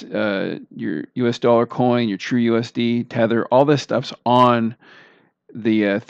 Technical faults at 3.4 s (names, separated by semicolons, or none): none